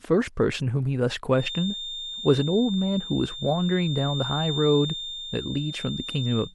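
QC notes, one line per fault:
1.31 s to the end, feedback whistle: a thin, steady 3.6 kHz tone sits around 10 dB below the speech, slowly swelling and fading in level. The likely cause is a loudspeaker-to-microphone loop held right at the edge of feedback, sustaining one frequency without running away.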